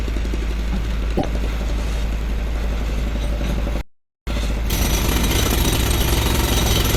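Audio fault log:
1.14–1.25 s, damaged data in a compressed stream: A short glitch breaks into the sound. Some of the compressed data here was corrupted. The decoder could not read those frames correctly. It produced garbled output, lost its place and hunted for the next valid frame header. That search explains the brief glitch.
3.81–4.27 s, playback stall: The sound stops abruptly in mid-flow. About 460 ms of silence follows before the audio resumes. The likely cause is that the player's buffer ran dry or its playback thread was blocked, so nothing reached the output. The gap is clean silence, not a fade or noise burst, because the output simply had no samples to play.
4.27–6.11 s, time-compressed catch-up: Right after the stall, the audio runs hurried, at about 1.25 times normal speed. Pitch stays unchanged. The player is working off its backlog by removing small slices and cross-fading across the joins. 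The hurried passage ends once the delay is recovered.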